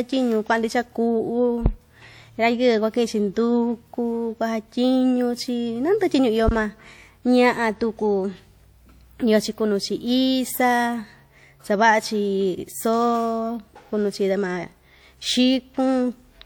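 At 1.66 s and again at 6.49 s the speech is hit by a phantom power thump, a deep low-frequency thud lasting about 84 ms and 104 ms, decaying within 19 and 24 ms. A supply switching on a live input sends a voltage step through the coupling capacitors. Unlike a handling bump, it is a single clean pulse with no rubbing or mechanical texture.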